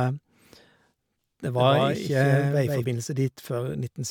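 From 1.56 s to 2.84 s the speech carries a doubled audio track. A second full-band copy trails the original by roughly 150 ms and sits about 5 dB lower. It has no decay and no room colour, so it sounds like a flat slapback rather than an echo. The copy cuts in and out abruptly at those times. The likely cause is the same signal being captured twice, once through a slower path.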